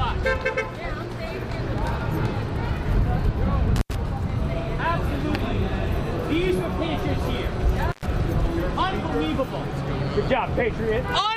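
The audio has two dropouts from an intermittent contact, around 3.76 to 3.95 s and 7.89 to 8.06 s. A loose cable or plug briefly opens the line for about 85 ms and then 110 ms, so the sound cuts out with crackle at each edge.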